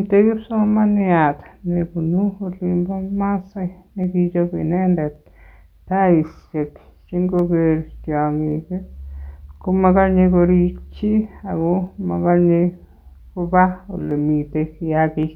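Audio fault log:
0.68–15.23 s, clock drift buffer slips: regular clicks every 1.12 s, around fifteen in all, likely a few samples slipping as two clocks drift roughly 150 ppm apart.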